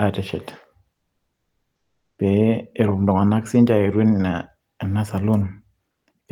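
From 0.93 to 2.17 s, and again from 5.91 to 6.07 s, comfort noise in place of the background replaces the real room sound with flat, featureless hiss, about 17 dB and about 4 dB quieter. Likely Opus DTX halted transmission during pauses. Spectrograms show smooth, uniform bands lacking fine detail.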